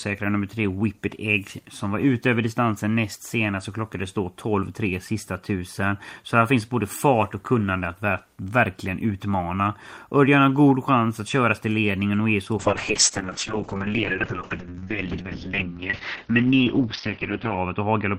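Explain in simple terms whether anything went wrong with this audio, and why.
Call bitrate drop from 12.59 s: the connection narrowed, forcing the encoder to use far fewer bits, so the speech turns rough and muffled until the end.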